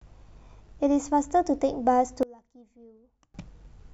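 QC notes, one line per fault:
2.23–3.34 s: one channel inverted. In mono the speech drops by about 26 dB and turns faint, because one side likely has reversed polarity, so the centred content common to both channels cancels and only their small difference remains audible.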